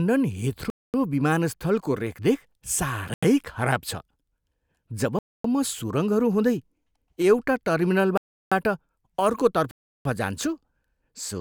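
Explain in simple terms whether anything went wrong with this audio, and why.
The speech drops out five times in blocks of digital silence: 0.70–0.94 s, 3.14–3.23 s, 5.19–5.44 s, 8.18–8.52 s and 9.71–10.05 s, each lasting roughly 85 to 340 ms. Each time, the audio cut straight to silence, most likely because the program didn't deliver the next chunk of sound in time. There's no fade at either edge, so the sound stops and starts again abruptly.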